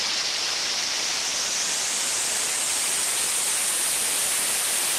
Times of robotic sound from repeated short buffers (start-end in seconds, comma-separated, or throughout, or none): none